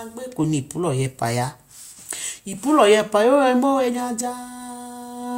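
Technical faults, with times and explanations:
No technical faults can be heard in this speech.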